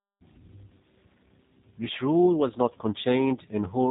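G.729 codec damage runs through the whole clip, from start to finish. The speech is rebuilt from a compact model of the vocal tract, a pitch predictor and a few pulses per frame, not stored as a waveform, and the roughness that results fits an 8 kbit/s G.729A encode. Nothing is left above 3.8 kHz, so consonants lose their crispness. The voice comes through intelligible but plainly rough and synthetic, with a buzzy, processed edge.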